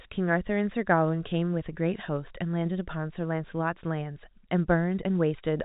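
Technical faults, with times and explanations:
Nothing here counts as a technical fault; the speech simply carries the narrow telephone sound of G.711 coding, with nothing above about 4 kHz and at most a faint trace of its quantisation noise.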